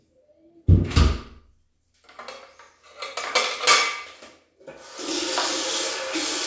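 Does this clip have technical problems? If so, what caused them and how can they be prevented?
No, there are no technical problems to report in this recording of sounds. Nothing here calls for a fix or any preventive step.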